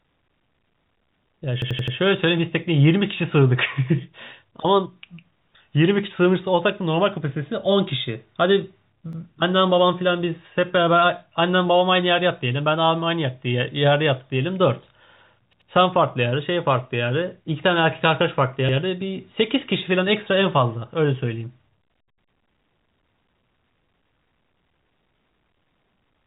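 Repeated buffer at 1.62 to 1.96 s, 9.13 to 9.22 s, 15.53 to 15.70 s and 18.69 to 18.77 s: fresh audio arrived late, so an 85 ms piece replayed four, one, two and one extra times, which fits a 4096-sample buffer. Each is a stutter with hard joins, over band-limited G.711 telephone coding.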